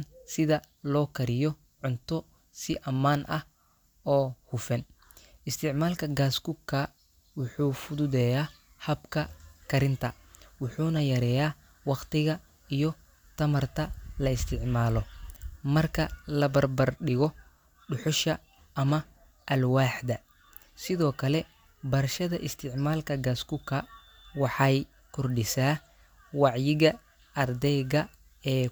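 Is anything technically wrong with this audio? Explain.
No, nothing technically wrong can be heard in this speech recording. There is no audible problem at any point in the clip.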